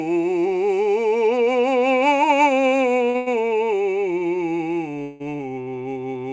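Music, carried over a call link with nothing above 8 kHz. At 3.10 s there is a short stall from a late packet. The sound holds for about 45 ms until 3.16 s. The receiver stretched the last audio while its jitter buffer sat empty, then resumed at the same point. Nothing is lost. Straight after, from 3.16 to 3.28 s, comes a call audio freeze. A second one runs from 5.02 to 5.22 s. Each time the sound turns into a fading buzz or hiss rather than silence, lasting 100 ms and then 175 ms. The music then picks up where it stopped, so a gap is inserted and nothing is skipped. The likely cause is packets held up in transit, which drained the jitter buffer.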